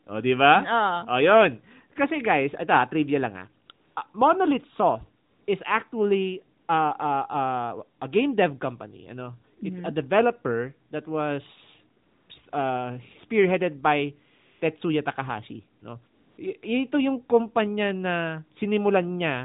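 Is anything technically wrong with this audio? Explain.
Yes. AMR comfort noise appears nine times between 3.66 and 16.38 s, from after "ito trivia lang ah" to beyond "a developer that was". Each gap lasts 20 to 300 ms. The phone judged silence and stopped sending speech frames. Smooth synthetic noise replaces the real background, then switches off.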